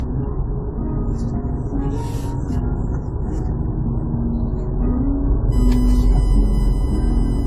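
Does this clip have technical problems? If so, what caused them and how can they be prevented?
Yes, there are two problems. Throughout the clip, the top end is gone: there's nothing above 14.8 kHz, and the sound has different kinds of compression grit overlapping. That's most likely transcoding between lossy codecs. The mix of artefacts points to something like low-rate AAC, then HE-AAC, then WMA at the end. Each pass re-encodes the previous one's damage and adds its own, and the lowest cut-off sticks. To prevent it, keep a lossless master and encode only once, straight from it.

From 5.52 s to the end there's a USB whine, a steady fixed-pitch tone at 1 kHz, sitting well below the main sound. A 1 kHz tone fits the USB bus's 1 ms frame rhythm: current drawn by the bus leaks into the audio through shared power or ground. To prevent it, use a powered hub or a USB isolator, or move the audio interface off the noisy bus.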